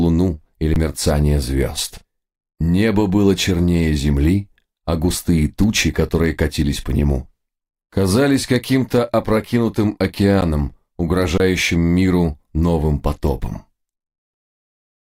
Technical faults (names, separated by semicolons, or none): underrun with held sample